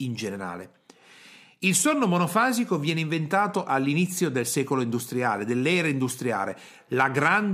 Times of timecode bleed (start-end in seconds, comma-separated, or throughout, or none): none